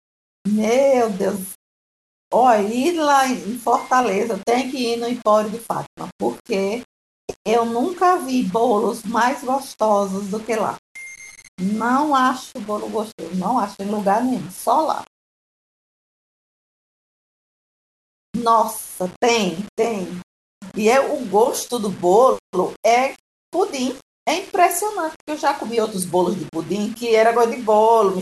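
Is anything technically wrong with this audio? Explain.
Yes. Low bit depth without dither runs throughout the speech, likely from rounding to roughly 6 bits. The error tracks the signal at about 25 dB below it, so quiet passages turn gritty, the softest sounds sputter or drop out, and the grain shifts with the speech.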